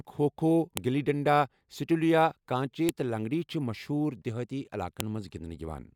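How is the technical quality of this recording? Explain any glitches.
The recording has one recurring glitch: a file header played as audio. Sharp, loud clicks occur at 0.77 s, before "گلی ڈنڈا سیٹولیا کانچے", at 2.89 s, before "تہٕ لنگڑی چھِ مشہوٗر", and at 5.00 s, after "لنگڑی چھِ مشہوٗر دہٲتی". Each marks a join where a header's bytes became samples. That makes a brief snap.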